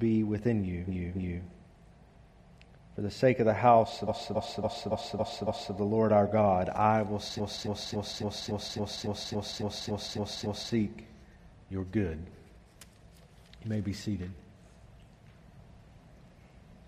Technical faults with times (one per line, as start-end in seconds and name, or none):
0.86-1.42 repeated frames
4.07-5.74 repeated frames
7.36-10.71 repeated frames